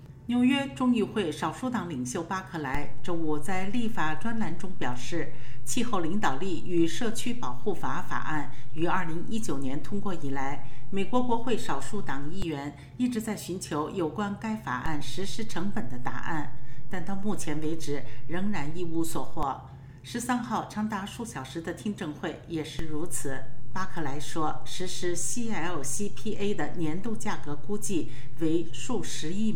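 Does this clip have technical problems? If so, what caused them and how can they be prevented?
Yes. DC steps at 2.75–12.42 s, 14.86–19.43 s and 22.79 s to the end: the waveform's zero line jumps by about −20 dBFS, each jump heard as a low thump. Prevent these with a high-pass or DC-blocking filter, and by avoiding converter recalibration or input switching mid-recording.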